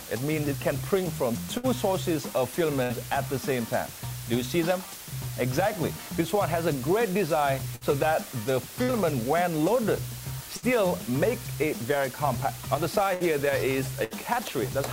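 From the start, low bit depth with dither reduces the sound to about 5 bits. The rounding error becomes a steady, even hiss about 15 dB below the signal, visible as a flat noise floor across the spectrogram.

A burst of packet loss occurs at 1.57, 2.83, 7.76, 8.83, 10.57, 13.14 and 14.04 s. Each time, roughly 55 to 65 ms of concealment holds and fades the last sound into a buzz or hiss, visible as smeared, decaying horizontal bands. About 60 ms of audio is then skipped, leaving an abrupt jump in the waveform.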